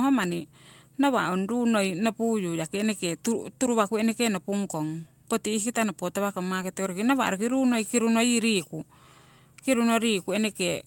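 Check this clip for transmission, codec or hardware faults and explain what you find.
Two brief transmission faults are present, both of the same kind. Each is a lost packet rebuilt from error correction. The first runs from 4.71 to 4.73 s, right after "waku nopung" and before "poti ihkita nopo tawakong". The second sits at 6.61 s, just after "poti ihkita nopo tawakong". Each rebuilt stretch lasts 20 ms, which fits one lost packet. The following packet carried a low-bitrate backup copy, and the decoder played it. So the speech never drops out. Instead, those 20 ms sound rougher and noisier.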